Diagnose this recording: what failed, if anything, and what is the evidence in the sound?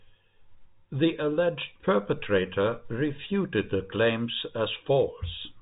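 Nothing has failed here, as far as I can hear; the speech has the narrow telephone sound of G.711 coding, with nothing above about 3.8 kHz, and that's just how a normal call on that path sounds.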